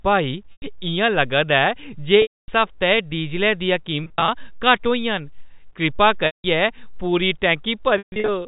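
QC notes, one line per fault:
0.53–0.62, 2.22–2.48, 4.04–4.28, 6.26–6.44, 7.98–8.28 s: packet loss with pitch repetition. Gaps of 100–260 ms are bridged by repeating the last pitch period, which gives a brief buzzy hold that fades over about 50 ms into silence before the sound cross-fades back. At 4.04 and 7.98 s the losses are scattered rather than continuous.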